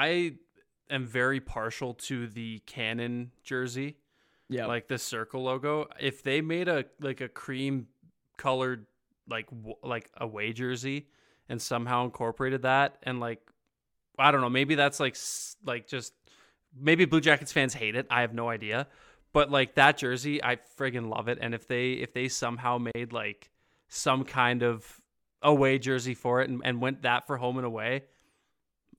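At 22.92 to 22.95 s, between "they if they somehow" and "like some kind of", the speech stops for about 34 ms. This is a gap at a join of encoded pieces: encoder start delay and last-frame padding were left in. The speech resumes exactly where it stopped with nothing lost, unlike a dropout.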